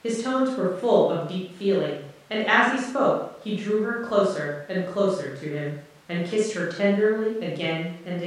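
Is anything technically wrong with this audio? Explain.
No, nothing in this speech recording points to a technical fault in the signal.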